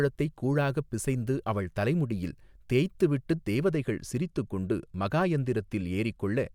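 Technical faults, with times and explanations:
3.76 s to 6.54 s, channel delay (comb filtering): from 3.76 s to the end, one channel arrives late by roughly a single sample, about 0.02 ms, and the two are summed to mono. The shared speech content cancels where the offset reaches half a cycle, placing the first notch up near 20 kHz. With such a tiny offset, the effect is a gentle loss of the very highest frequencies, so the speech turns slightly dull at the top.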